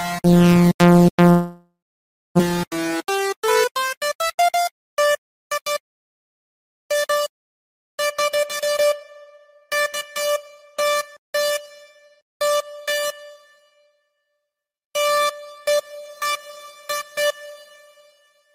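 At 1.29 s the sound stops being fresh and gets stretched out as a buzz or hiss that fades, then drops to silence for about 630 ms before the audio picks up again at 2.41 s. That's most likely a long network dropout: around a second of audio never showed up, the receiver filled the gap for roughly 1.1 s, and when things resumed the missing chunk was simply gone, with the timing shifted by something like 70 ms.

Right after, from 2.49 to 3.26 s, there's a jitter buffer speed-up. After the gap, the buffer was holding more audio than it wanted, so the receiver trimmed many tiny pitch-period-sized slices to catch up, somewhere around 70 ms in total. The audio plays at about 108% speed with the pitch unchanged, which is enough to make that stretch sound hurried.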